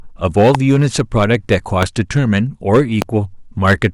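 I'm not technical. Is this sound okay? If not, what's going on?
No. The speech has hard clipping throughout: its loudest moments are pushed past what the recording can hold, so their tops get sliced flat. That adds a gritty crackle that rides only on the louder parts of the speech and comes and goes with them.

Separately, there are three loud pops, at 0.55, 1.83 and 3.02 seconds. Each is a single sharp crack, much louder than the speech, which carries on underneath. Unlike the clipping, they don't follow the speech's loudness. They were likely caused by an electrical jolt such as a switch, plug or static.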